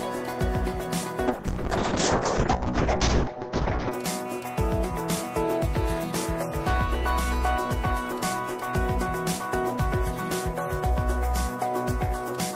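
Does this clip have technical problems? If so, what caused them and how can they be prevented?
Yes. Call bitrate drop, 1.29 to 3.99 s: the encoder fell from 64 to 6 kbps, coding coarsely and muffling everything above 8 kHz. A higher minimum bitrate and steadier bandwidth estimation would prevent it.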